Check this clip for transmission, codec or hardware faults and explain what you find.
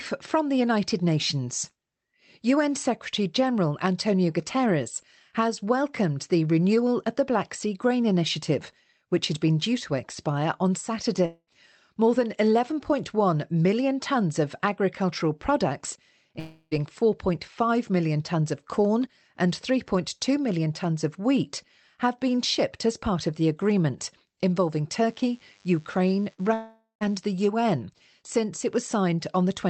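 Three kinds of fault turn up in the speech: repeated long network dropouts, a DECT cordless phone buzz, and one short burst of packet loss.

Long network dropouts occur at 11.25–11.49 s, 16.39–16.73 s and 26.53–27.03 s. The stream most likely stopped delivering audio for about 220 ms, 320 ms and 480 ms respectively. The receiver covered each gap by extending the last sound as a decaying buzz or hiss. In the first two that concealment fills almost the whole gap, with only brief silence before the speech returns. In the third the fill fades into about 130 ms of silence, and the speech picks up further on with that stretch gone.

The DECT cordless phone buzz runs from 25.07 to 27.16 s. A nearby DECT handset or base transmits a radio burst every 10 ms, and the audio electronics rectify it into the signal. The result is a thin, steady 100 Hz buzz with a ladder of harmonics above it. It sits faint, far below the speech, but stays constant throughout.

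A burst of packet loss hits at 26.33–26.41 s, just before the last dropout. About 40 ms of audio failed to arrive in time. The receiver bridged roughly 48 ms by continuing and attenuating the preceding sound, so the last sound is briefly held as a dwindling buzz or hiss. The speech then resumes slightly ahead of where it left off, with the lost fragment skipped.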